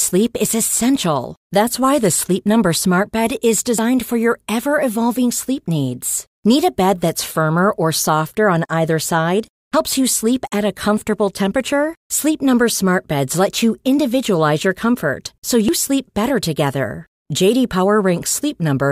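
Three quick skips land at 3.79 s, before "for your ever evolving", at 9.74 s, before "you sleep at a", and at 15.69 s, before "sleep better together". They come 6 s apart. Each drops roughly fifty milliseconds with the edges butted together, likely audio missing between chunks.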